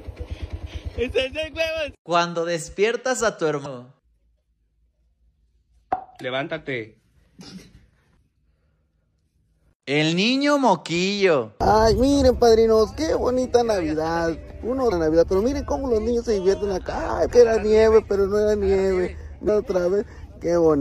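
Damaged data in a compressed stream makes the decoder lose sync, giving four 42–44 ms glitches at 3.62–3.66, 14.88–14.92, 17.26–17.30 and 19.45–19.49 s, which show as broadband vertical smears and abrupt waveform breaks.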